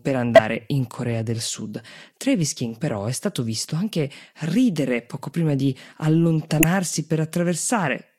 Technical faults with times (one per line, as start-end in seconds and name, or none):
0.36-0.40 corrupt frame decoded
6.58-6.64 corrupt frame decoded